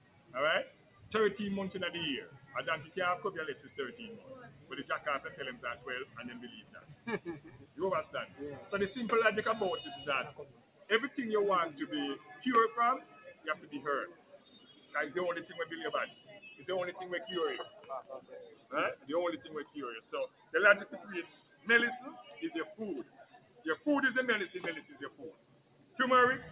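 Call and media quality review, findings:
Noise suppressor applied to music or sounds, whole clip. Level pumps and thins; held tones and tails sink while attacks pass. Speech-tuned suppressor treating steady content as noise, gain swinging around 15 dB. Path band-limited at 4 kHz, consistent with G.711 mu-law.

Sound cut by the noise suppressor at 0.0–1.11 s, 2.27–8.69 s, 10.31–10.9 s, 12.18–14.94 s, 16.1–16.42 s, 17.74–21.67 s, 23.04–23.65 s, and 24.93–25.99 s. Sustained and decaying sound drops about 11–13 dB and tails are truncated. Suppressor classifying it as noise.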